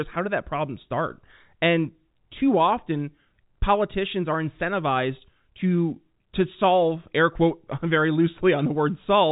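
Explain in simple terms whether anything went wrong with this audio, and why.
Nothing went wrong with the signal: the speech has simply been carried through ordinary G.711 telephone coding, which gives it the familiar narrow sound of a phone line, with nothing above about 3.8 kHz coming through.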